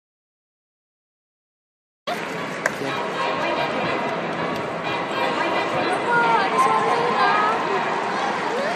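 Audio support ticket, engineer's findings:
Input path dead from clip start until 2.07 s; recorder kept writing silence, likely a disconnected input device, failed link or stray mute. Audio dropout to silence: silent gap, no room tone, then sound enters abruptly mid-flow at 2.07 s. Material in that gap lost.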